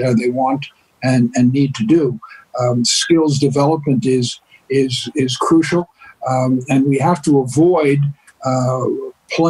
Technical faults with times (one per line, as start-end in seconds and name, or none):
5.80-8.01 call bitrate drop